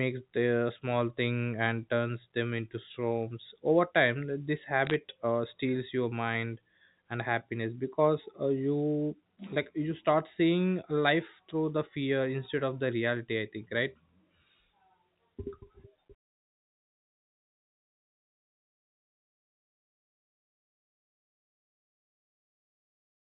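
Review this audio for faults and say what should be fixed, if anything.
Bit errors on a digital phone line cause brief crackle from 4.87 to 4.94 s, between "storms over time this" and "uh steals your mind". Flipped bits each corrupt one sample. The rate is roughly three in a thousand. Error-checked transmission or a cleaner digital line would prevent this.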